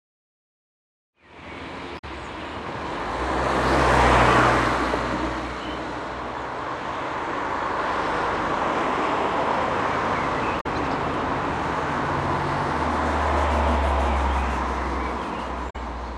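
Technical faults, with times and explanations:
1.95–2.04 s, 10.57–10.66 s and 15.66–15.76 s: damaged data in a compressed stream. Each is brief, lasting about 0.09 s. The decoder hits corrupted bytes, misreads those frames, loses sync and resumes at the next valid frame header. They also stand apart from the smooth fade-in that finishes around 1.7 s.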